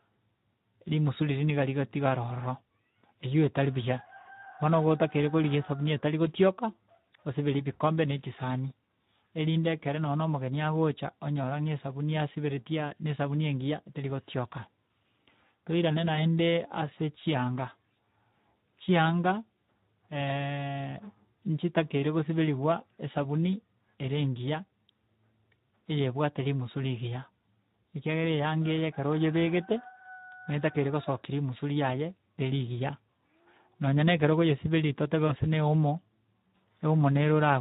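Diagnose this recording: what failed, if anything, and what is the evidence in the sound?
The codec stage shows Speex codec damage throughout. The speech is hoarse and noisy, which fits a low setting around 11 kbps. On a spectrogram, harmonics look smeared, and anything above 4 kHz appears as diffuse, shaped noise rather than structure.

At the network stage, there is VoIP packet loss concealed by the speech codec at 16.15–16.26 s and 35.27–35.33 s. Each gap sounds like a brief stretched sound that fades, consistent with a single lost 20 ms frame. The decoder extrapolated pitch and filter, then recovered gradually. Spectrograms show flattened, repeated harmonics fading out.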